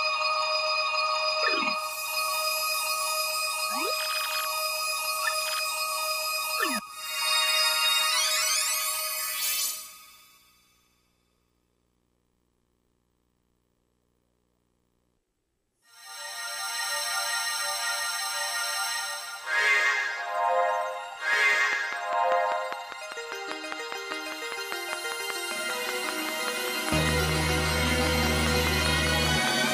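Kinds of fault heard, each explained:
Train of clicks: From 21.33 s to 29.69 s a steady ticking rides over the sound at about five clicks per second, evenly spaced, roughly forty in all. Each click has the same sharp shape and stands well above the sound. Interference or a faulty connection or power supply is the likely cause.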